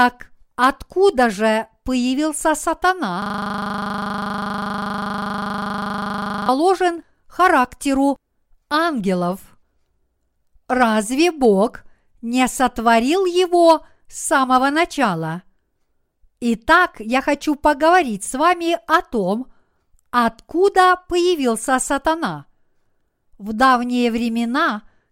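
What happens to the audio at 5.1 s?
At 5.1 s the speech is caught in a system hang loop running from 3.22 to 6.49 s. The hardware keeps replaying one frozen 40 ms buffer, so an identical slice repeats 82 times as a steady 25 Hz buzz. Unlike a dropout, the sound never falls silent.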